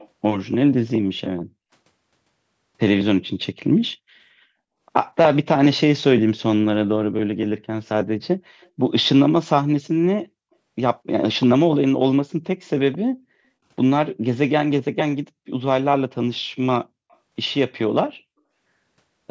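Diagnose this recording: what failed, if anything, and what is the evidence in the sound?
Call-processing echo leak: very faint copies at 0–0.09, 8.61–8.69 and 17.1–17.17 s, lagging 225 to 267 ms, likely a far-end canceller missing loudspeaker pickup.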